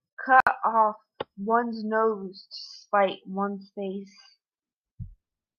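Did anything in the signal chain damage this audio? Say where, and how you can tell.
Yes. At 0.40 s the speech drops into a sudden silence of about 64 ms, with smeared edges, then resumes where it stopped at 0.47 s. This is a gap at a join of encoded pieces: separately encoded segments were spliced untrimmed, leaving encoder delay and final-frame padding in place.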